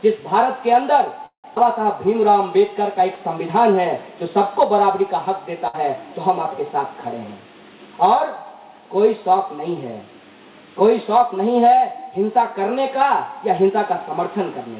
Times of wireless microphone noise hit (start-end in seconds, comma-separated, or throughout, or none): none